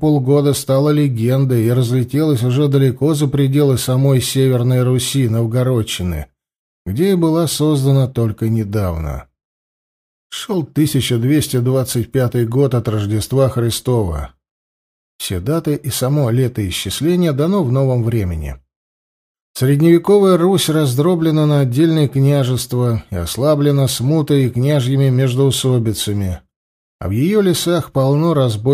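No technical faults are audible.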